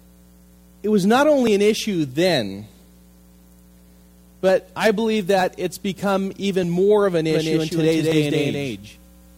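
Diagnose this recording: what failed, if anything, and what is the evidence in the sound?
Five short skips point to the driver or buffer stage, most likely a dropped buffer (overrun) each time, at 1.47, 4.49, 5.41, 6.64 and 8.12 s. Each is a jump ahead in the sound with no gap of silence. The capture side didn't fetch its samples before the hardware overwrote them, so a chunk vanished and the edges got butted together. The one at 4.49 s loses the most, a few tens of milliseconds, and the rest lose about 10 to 20 ms.

From about 7.3 s to the end there's a doubled audio track. The copy kicks in abruptly, trails the original by roughly a fifth of a second, and sits at about the same level, full-band and with no room tail or decay. That sounds like a second, slower capture path getting mixed back in at the routing or driver stage, which is the likely cause, rather than any acoustic echo.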